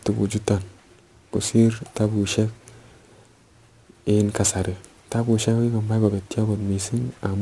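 Aliasing runs through the whole clip. The speech appears to have been resampled down, pointing to a rate near 24 kHz, without a proper low-pass filter first, so content above 12 kHz folds back into lower, unrelated frequencies. Sibilants come out gritty and metallic, with folded energy roughly 25 dB below the speech.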